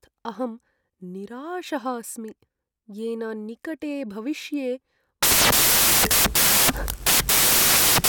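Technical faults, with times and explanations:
5.23 to 8.08 s, samples built from the wrong bytes: the speech turns into loud, harsh broadband noise and stays so to the end. Each sample's bytes are joined wrongly, so the rapidly changing low bits dominate.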